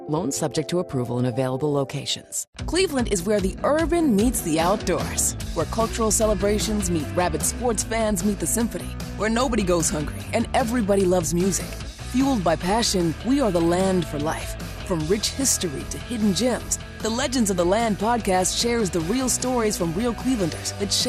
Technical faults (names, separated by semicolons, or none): MP2 compression